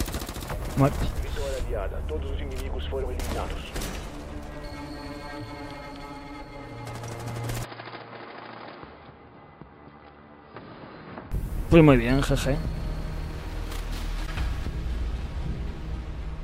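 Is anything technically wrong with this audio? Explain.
Yes, there are two faults.

At 3.05 s, compressed frames are skipped: about 20 ms of audio, roughly one 21.3 ms frame, never reaches the output, so the sound jumps forward.

From 7.64 s to 11.32 s, the input likely switched to a poorer device. With no gap at the change, the sound turns dull, with nothing above 5 kHz, drops by roughly 10 dB, and gains a new noise floor about 35 dB below the signal. It then clears up again.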